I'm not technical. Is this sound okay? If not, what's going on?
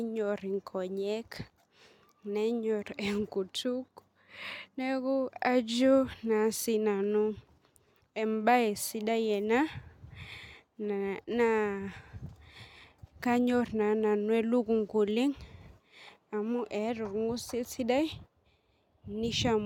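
Yes, this sound is okay, and there's nothing going on with it that needs fixing.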